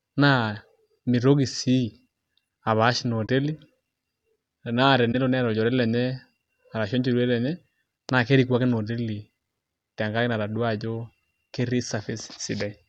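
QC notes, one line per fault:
3.26–3.29 s and 5.12–5.15 s (just before "neeta olchore"), corrupt frame concealed: damaged AAC frames were caught by the decoder and patched over with muting or a scrambled copy of the previous spectrum, over spans of about 30 ms.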